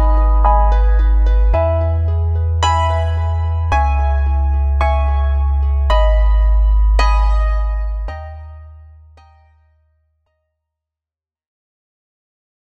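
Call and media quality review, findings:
No faults found; smooth fade-out from about 7 s.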